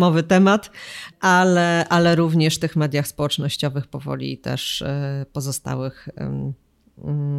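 A short stretch of speech, and nothing technically wrong turns up anywhere in it.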